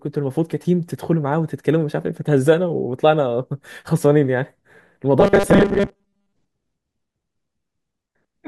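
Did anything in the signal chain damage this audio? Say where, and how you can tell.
Yes, at the driver or buffer stage. From 5.20 to 6.33 s the speech turns into a rigid, metallic buzz locked at 200 Hz while still loosely following the syllables. This is robotic sound from repeated short buffers: the likely cause is audio arriving too seldom, so a fragment about 5 ms long, matching the 200 Hz period, is replayed in place of most of the real audio. Unlike codec warbling, the pitch stays fixed rather than smeared.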